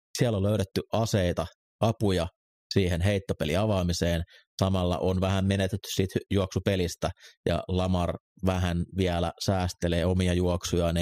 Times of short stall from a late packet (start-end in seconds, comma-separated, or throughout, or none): none